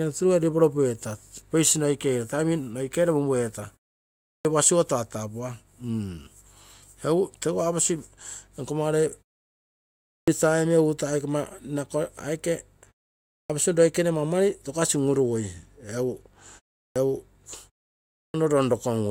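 At 4.32, 10.14, 13.37, 16.82 and 18.22 s, speech resumes with a clipped start after a pause. After each gap of 0.3 to 1.0 s, the output device has gone idle and needs about 120 to 140 ms to wake, so the opening of each phrase is swallowed and words burst in abruptly. On a waveform, each segment begins at full amplitude with no onset ramp. A spectrogram shows energy starting with a hard vertical edge.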